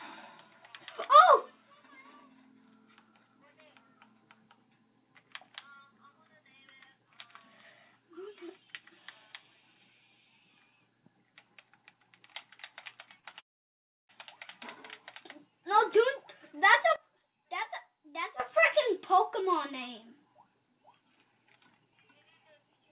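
Over a band that stops at 4 kHz, consistent with a G.711 mu-law call path at 64 kbps, the first trouble comes at 13.20 to 13.25 s and again at 13.31 to 13.35 s: two short stalls from a late packet. Each time the receiver's jitter buffer ran dry and it stretched the last sound, by 31 ms and then 22 ms, before resuming at the same point. Nothing is lost. A sound is just held a fraction too long with a faint buzz or dip, which separates these from a dropout, where audio would actually be missing.

From 13.39 to 14.11 s comes a longer call audio freeze, most likely from packets held up in transit. The held sound fades almost at once into about 670 ms of silence, roughly 0.7 s of inserted gap in all, and then the audio picks up exactly where it stopped. Its length and the silence distinguish it from the brief stalls just before.

At 16.96 s the level drops by about 12 dB in a single step and stays down until 18.40 s, then steps back up. 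This is a sudden gain jump, likely a digital gain change applied with no ramp. The background noise drops and returns together with the sound, and both edges are abrupt. A fade or a quieter source would change gradually or leave the noise floor where it was.

From 19.71 to 22.24 s a jitter buffer speed-up runs the audio at about 107 % of normal pace. To shed excess buffered delay, the receiver repeatedly cut out pitch-period-sized slices, around a fifth of a second in total. The result sounds hurried, but pitch is unchanged, which distinguishes it from a sample-rate or playback-speed error that would raise the pitch as well.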